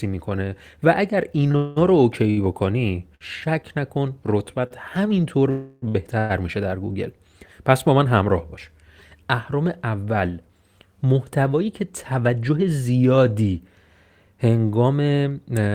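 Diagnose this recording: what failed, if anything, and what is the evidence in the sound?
The network path failed, and the receiver's jitter buffer concealed the damage. From 1.51 to 3.23 s the speech shows repeated stalls (stutter). It hangs three times, the longest hold 66 ms. About 152 ms of filled sound is added, roughly 9% of that stretch. Nothing is lost. Packets arrived later or slower than playback, so the buffer kept running dry. Each time the receiver extended the last sound until data returned.

Three longer holds sound like a call audio freeze. At 1.56 to 1.78 s the sound sustains for 201 ms. At 5.50 to 5.84 s it holds for 320 ms, and at 6.19 to 6.32 s for 110 ms. The held sound never drops to silence, and speech resumes exactly where it paused. The cause is likely packets held up in transit, leaving the buffer empty while the last sound was continued.

Two brief hitches are a short stall from a late packet. 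At 4.67 to 4.73 s a sound is stretched by 40 ms. At 5.88 to 5.97 s the stretch is 64 ms. Each time one packet missed its playout slot. The receiver prolonged the previous sound and then carried on from the same point, so no audio is missing. Each stall adds delay equal to its length.

From 11.53 to 12.57 s a jitter buffer speed-up is audible. The speech runs at about 109% of normal speed with unchanged pitch, so it sounds rushed. The buffer had grown beyond its target. To recover, the receiver cut many short pitch-period pieces in quick succession, removing roughly a tenth of a second in total.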